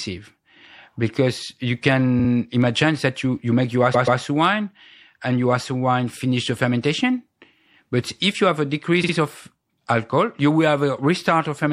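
MP3 compression runs through the whole of this speech recording, most likely from a low-bitrate encode of around 64 kbps: the treble is cut off and weak detail flickers, giving a plainly audible watery, swirly quality. Repeated frames occur at 3.93 to 4.20 s, just after "you you make your" and before "wine and your". A 130.6 ms block plays twice more, which fits five compressed frames being resent, so the sound stutters and runs 261.2 ms longer. A second stutter falls at 9.03 to 9.13 s, between "if you have a" and "of alcohol you will", where a 52.2 ms block, about two frames, repeats twice, adding 104.5 ms.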